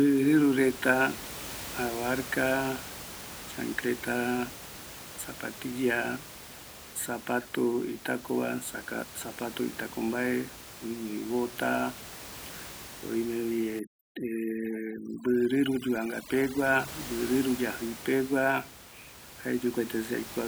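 From 13.79 to 16.88 s, just before "mbɨ rɨɨru", the speech goes through overdone noise removal. The suppressor is set too aggressively for the room noise, which otherwise sits about 15 dB below the speech. It drives individual frequency bands down or off wherever they come close to its noise estimate, so the quieter parts of the speech are cut along with the noise. The background drops and breaks up into twinkling specks.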